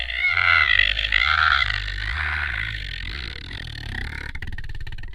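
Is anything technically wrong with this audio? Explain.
Yes. From 3.58 to 3.81 s there is DAB burbling. Weak reception let bit errors, at a rate of roughly 0.15 percent, slip past error correction into the MP2 data, corrupting samples across what sounds like about fifteen frames. That puts brief noise blips into individual sub-bands of this sound.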